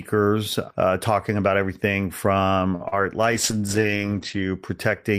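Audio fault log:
2.75 to 2.82 s, short stall from a late packet: just after "talking about everything from", the sound hangs for a moment, held too long with a faint buzz. A packet came late, the jitter buffer ran dry, and the receiver stretched the last sound for about 46 ms until the packet turned up. Playback then resumed from the same point, so nothing is lost, but everything after it arrives about 46 ms later than before.
2.88 to 2.94 s, short concealed packet loss: still just after "talking about everything from", there is a brief smear or wobble where the sound loses its edge. About 40 ms of audio never reached the decoder in time. The receiver filled the gap by extending the last sound for about 37 ms and then blended back into the real signal, so a short sound in that spot can be softened or drop out.
3.32 to 4.65 s, call bitrate drop: the sound turns muffled and rough, with a watery, coarse texture, before it clears. 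The call's bandwidth estimate fell, and the encoder was cut from 32 kbps to 10 kbps, staying at its lowest for about 1.15 s. At that rate the coding grows coarse and the bandwidth shrinks from 20 kHz to 8 kHz, which removes the top end until the bitrate recovers.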